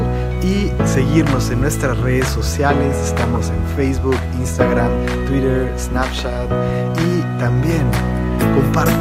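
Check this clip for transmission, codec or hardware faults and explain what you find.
One fault: DAB burbling from 3.2 to 3.37 s. Bit errors slip past error correction, so single MP2 sub-bands get short noise blips or level jumps across about seven frames, giving brief blips of noise, seen as isolated bright spectrogram blocks.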